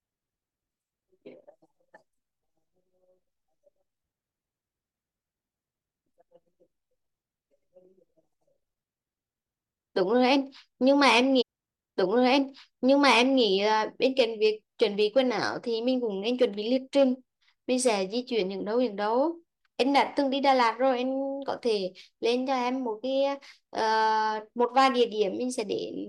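At 11.40 s a short blip marks a jump back, and about two seconds of speech play again until 13.42 s: a stream segment repeated, the player queuing the same chunk twice.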